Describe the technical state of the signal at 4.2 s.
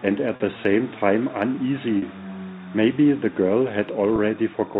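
Right around there you've got packet loss with pitch repetition from 4.16 to 4.18 s. A single 20 ms chunk went missing, and the receiver papered over it by repeating the last pitch period, so the speech briefly holds with a buzzy sustain.

Underneath, timecode bleed is chirping away the whole time. It's a square-wave warble flipping around 1 and 2 kHz, roughly 30 dB below the speech, consistent with 29.97 fps timecode leaking in from a neighbouring line.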